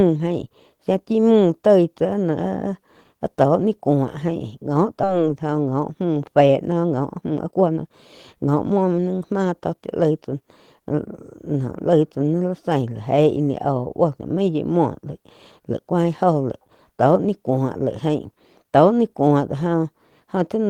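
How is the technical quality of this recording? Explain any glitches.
The recording has a couple of real delivery problems: one jump where audio goes missing, followed by two stretches where the speech is hurried along.

At 5.03 s there's a skip ahead. Roughly a second and a half of speech just isn't there, and the two sides are butted together with no gap or fill. That happens when a chunk of audio gets dropped, either in transit or by an overflowing jitter buffer, while newer audio is already queued. So you hear a sudden splice rather than a pause.

Right after that, there's a jitter buffer speed-up. From 6.41 to 7.91 s the speech runs at about 125% speed, shedding around 0.4 s. Then from 8.39 to 11.14 s it runs at about 110%, trimming around 0.3 s. The buffer was holding more audio than it wanted, so it kept snipping out tiny pitch-period-sized slices to catch up. The pitch stays put, but the talking sounds rushed, most noticeably in that first, faster stretch.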